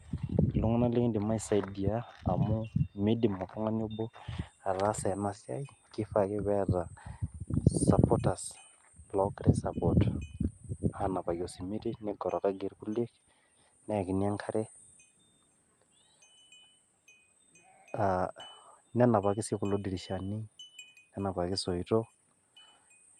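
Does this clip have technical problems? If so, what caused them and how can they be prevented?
No, nothing stood out as a technical problem on listening to this speech recording, so there is nothing here that calls for a cause or a fix.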